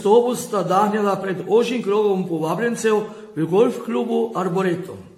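Throughout the speech the sound is swirly, smeared and hollow, consonant attacks blur, and nothing reaches above 16.6 kHz. This is likely generation loss: repeated AAC-LC encoding, perhaps seven passes near 64 kbit/s, each requantising on a shifted frame grid and compounding noise and spectral holes.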